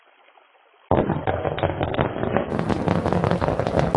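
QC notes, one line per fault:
0.0 to 2.5 s, adaptive stream starting at a low bitrate: nothing reaches above 3.8 kHz and codec artefacts are stronger, consistent with a very low-rate AAC rendition of about 16 kbit/s. At 2.5 s the player switches to a higher rate, near 96 kbit/s, restoring treble abruptly without any gap.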